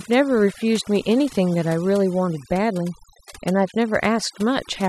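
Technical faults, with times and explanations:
Throughout, overdone noise removal: a noise reduction stage was pushed far too hard, so any frequency band sitting close to its estimate of the background noise gets pulled right down or switched off, and the quieter parts of the speech are caught along with it. The result is a background gone almost silent apart from small twinkling specks, while the voice has its softer detail stripped away.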